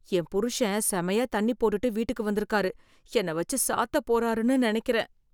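No technical faults can be heard anywhere in this recording. Nothing in the speech needs a timestamp or a fix.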